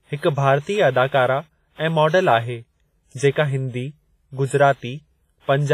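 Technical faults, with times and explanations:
Throughout, WMA compression: The speech has a ringing, washy quality, with a hiss that swells and fades along with the signal, and nothing is present above 15.5 kHz. This is likely Windows Media Audio. Its transform coding spreads quantisation noise over long blocks, so the error smears across tens of milliseconds instead of staying under each sound. The heavy damage and the zeroed weak detail fit a low bitrate of around 24 kbps.
1.75 to 1.79 s, pre-echo: A brief hiss arrives about 34 ms ahead of a sharp attack, which then sounds softened and smeared. A transform codec spreads its quantisation noise evenly over a whole block. Here the attack falls late in a block, so noise scaled to the loud onset also fills the quiet gap just before it. That early noise is heard as a wash leading into the transient.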